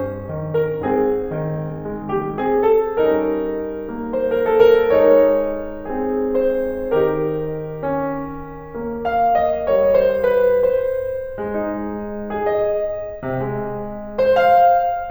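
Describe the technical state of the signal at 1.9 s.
At 1.9 s the music sits inside a time-stretched section running from 0 to 2.88 s, played about 1.87 times faster at unchanged pitch, sounding rushed, likely from software dropping short segments.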